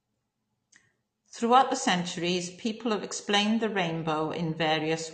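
Throughout, the speech sounds dull, with nothing above 8.6 kHz, likely low-bitrate audio saved at a high bitrate: an earlier lossy encoding's losses and cut-off carried into a larger file.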